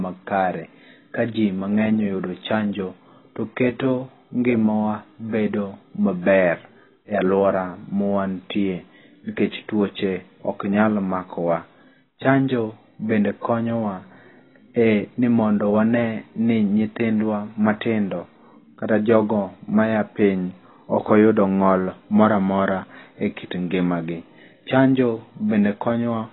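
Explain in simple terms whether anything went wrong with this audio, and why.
AAC compression, throughout: the speech sounds dull and smeared, with nothing above 4 kHz, likely because a heavily squeezed encoder discarded the high frequencies to save space.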